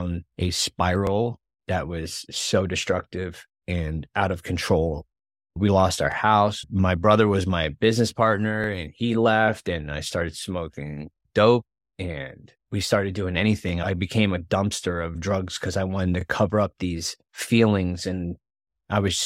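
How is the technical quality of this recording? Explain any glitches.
The speech is marred by a regular stutter from overlapping chunks at 1.07, 6.12, 8.64, 11.16, 13.69, 16.21 and 18.73 s, just before "that was so destructive", after "and we started doing", and after "because I wanted to". Each chunk starts about 23 ms before the previous one ended, so that sliver replays. Unlike a dropout, nothing is missing, and the steady 2.5 s spacing distinguishes it from random clicks.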